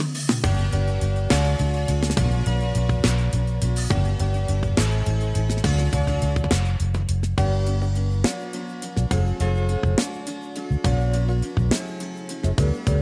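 A wrong sample rate runs through the whole clip: the samples are played back faster than they were captured, with no conversion between the two rates. Everything runs 1.38 times too fast and sits about 5.6 semitones too high, with speed and pitch rising together. That ratio fits material recorded at 16 kHz being played at 22 kHz. The result sounds hurried and shrill, with every event compressed in time and lifted in pitch.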